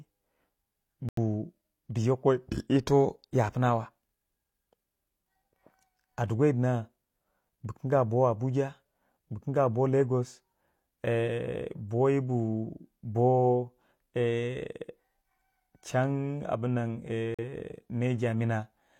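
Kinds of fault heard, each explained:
Corrupt frame muted: The decoder rejected damaged compressed frames and substituted silence. The speech drops out abruptly at 1.09 s and 17.34 s, about 0.1 s each.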